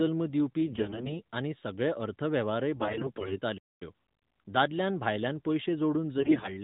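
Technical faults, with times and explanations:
0.66–1.13 s, 2.76–3.39 s and 6.18–6.55 s (after "दादल्यान भायल्यान पयशे"), AMR bit errors: around 15 percent of the weakly protected bits arrive flipped, so the speech turns hoarse, scratchy and gargly.
3.57–3.82 s, playback stall: the audio falls silent for about 230 ms mid-flow, then resumes, likely because the player ran out of data.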